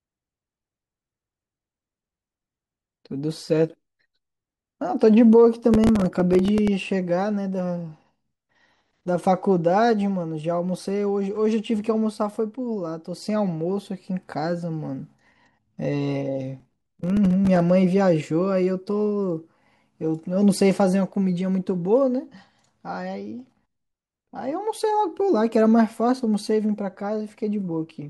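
Gritty crackling tears through the speech from 5.74 to 6.68 s and again, denser, from 16.6 to 17.70 s: processor overload crackle, where tiny buffers of a few milliseconds missed their deadlines and replayed stale audio with hard edges.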